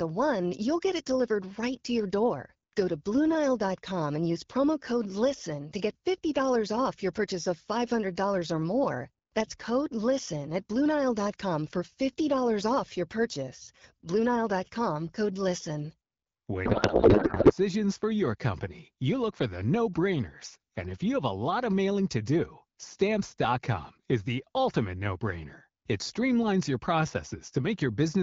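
A codec payload misread runs from 16.65 to 17.53 s, just under a second, during which the speech is replaced by garbled noise and warble that barely tracks it. The AMR wideband stream was packed in octet-aligned form but unpacked as bandwidth-efficient, so each frame's fields were read from shifted bit positions. The frames still looked valid and decoded without error, but into the wrong parameters, until the packing matched again.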